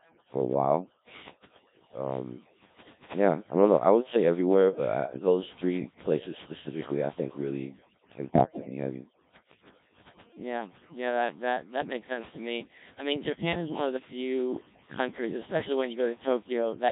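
From start to finish the speech has been through overdone noise removal. The suppressor pushed frequency bands down or off whenever they sat near its noise estimate, so the background is near silence dotted with twinkling specks, and the quieter parts of the voice go missing. Unlike ordinary band-limiting or dull filtering, the loss is patchy and keeps shifting, which gives the warbly, bubbling residue.

The whole clip is also carried by the Codec 2 vocoder, heavily damaged, with a robotic buzz that fits a rate of about 1.3 kbit/s. Nothing of the original waveform survives. The decoder rebuilds the voice from sine waves using only pitch, voicing, energy and a coarse spectral envelope. That is why it sounds synthetic and buzzy rather than muffled or smeared. A conventional low-bitrate codec blurs detail, but this one replaces the voice with a model of it.

From 8.32 s to 8.69 s come bit errors on digital voice radio. 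At roughly one bit in ten wrong, the corruption lands on the parameters themselves, and the short burst points to about eight frames hit. Each bad frame takes a wrong pitch, level or tone colour, so the voice lurches into bleeps, warbles and robotic gibberish. Packet loss would leave gaps or repeats instead, but here the synthesiser keeps running on garbage values.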